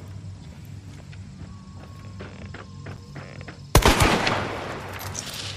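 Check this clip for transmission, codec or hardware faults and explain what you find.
One hardware fault is present, a loose connector crackle from 2.91 to 2.99 s. For about 80 ms a worn or dirty contact makes and breaks rapidly, chopping the signal on and off. The result is an irregular burst of crackle and scratching laid over the audio.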